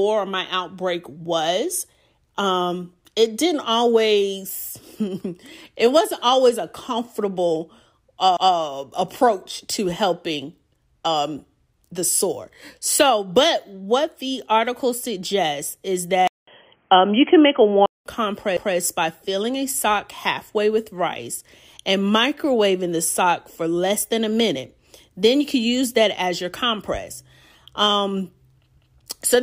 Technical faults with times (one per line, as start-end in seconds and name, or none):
8.37-8.57 overlapping chunks
16.27-18.06 input switched to a poorer device